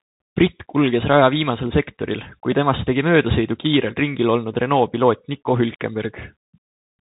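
From start to finish the speech carries the sound of the Bluetooth CVSD headset codec. Nothing above 4 kHz gets through, so the voice is boxed and narrow. The encoder sends one bit per sample, up or down, with an adapting step size. That fits a 64 kbit/s stream. The damage is plainly audible. A granular hiss sits under the voice. S sounds turn scratchy. Loud, bright moments distort where the step cannot keep up.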